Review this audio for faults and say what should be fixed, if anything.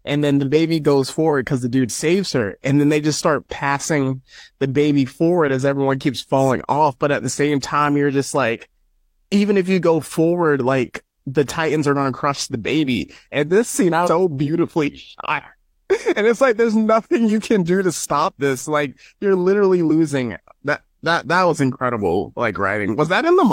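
At 14.03 to 14.09 s, right after "and this scene i", the speech jumps abruptly forward mid-word with a brief blip at the join, as though a piece of the programme has simply vanished. This is likely a stream segment skipped: one chunk of the segmented stream failed to arrive, and the player moved straight on to the following segment instead of waiting, leaving a hard splice where the missing audio should be. To prevent it, have the player retry or buffer failed segments before advancing, and check the origin for segments that fail intermittently.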